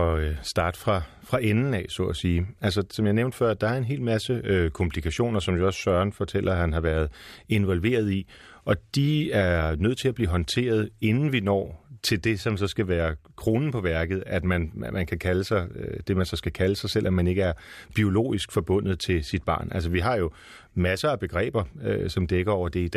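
Speech, with nothing technically wrong with it.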